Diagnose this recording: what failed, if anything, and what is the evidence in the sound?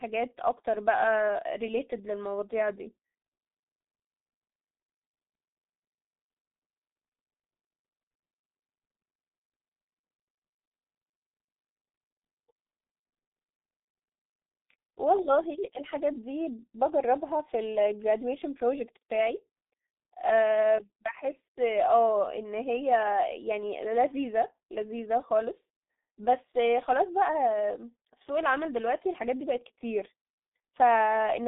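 The failure is at the codec stage: G.723.1 coding runs through the whole speech clip. Heavy damage leaves it muffled and hoarse, with smeared consonants, which fits a roughly 6.3 kbit/s stream. On a spectrogram, energy sits between 200 Hz and 3.7 kHz with nothing above 3.8 kHz, and 30 ms frame blockiness shows.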